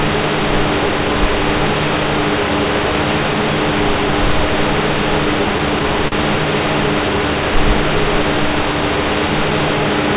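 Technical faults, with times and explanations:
6.08 to 6.14 s: short stall from a late packet. A packet came late and the jitter buffer ran dry. The receiver held the last sound for 41 ms, then resumed where it stopped. Nothing is lost, but the sound briefly hangs with a faint buzz or dip.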